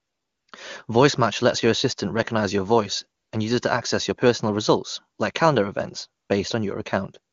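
From 0.0 to 0.47 s, after "assistant recognize your voice" at 3.21 to 3.31 s, and after "results like calendar events" at 6.23 to 6.29 s, AMR comfort noise replaces the real background: the sender stopped transmitting speech frames, so the receiver substitutes a smooth, steady synthetic hiss that switches in and out.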